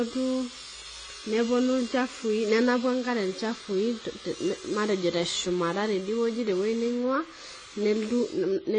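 From start to finish the speech is band-limited, with nothing above 9.7 kHz, and it sounds dull and smeared. Sibilants and sustained vowels carry a warbling, fizzy texture where the upper bands thin out or turn to noise. The cause is likely AAC compression: the encoder lowered its cut-off and quantised the remaining spectrum coarsely against its hearing model. The plainly audible damage fits AAC-LC at a low bitrate, around 24 kbps.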